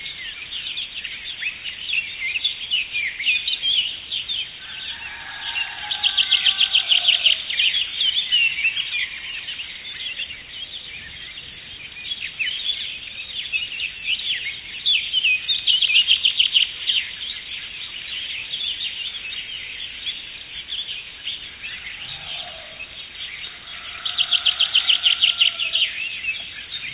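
A recording of everyday sounds, and nothing is technically wrong with it.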